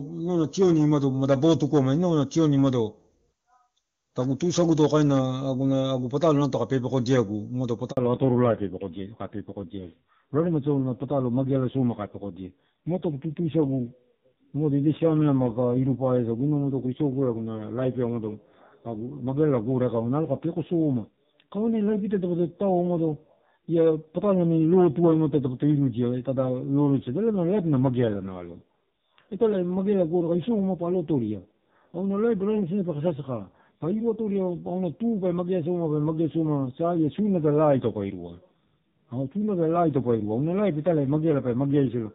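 At 7.91 s the sound cuts out for 60 ms, until 7.97 s: a handover gap, where the call was passed between networks and no frames arrived meanwhile. Unlike scattered packet loss, it is one clean silence, and the audio after it sounds different.

From 7.97 s to the end, a fallback to narrowband follows. The HD Voice link, which sounds clear beforehand and fits AMR-WB at 23.85 kbit/s, gives way to a narrowband codec. Nothing above 4 kHz remains, and the sound turns dull and raspy, consistent with AMR-NB at 5.9 kbit/s. A plain low-pass filter would not add that roughness or begin right at a dropout.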